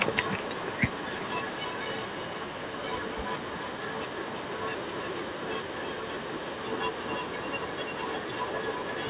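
From 0.12 to 2.83 s, 3.07 to 4.63 s and 4.8 s to the end, a delayed copy of the speech trails it by 0.32 to 0.33 s, likely an echo leak from a far-end loudspeaker. It is a distinct repeat rather than a smooth reverb tail, roughly 10 dB down at first and louder from 4.8 s, all within the narrow band below 4 kHz.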